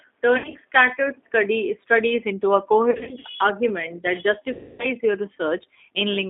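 The whole clip runs through G.729 at what sounds like 8 kbit/s: the line is squeezed to about 250 Hz to 3.6 kHz, and the speech has that rough, synthetic edge. VoIP packet loss, concealed by the speech codec, hits at 0.38 to 0.57 s, 2.91 to 3.26 s (between "studies into a" and "argument that"), and 4.53 to 4.87 s (right after "argument that"). Each time the decoder stretches the last sound into a fading buzzy tone or coloured noise, and the weakness lingers briefly after.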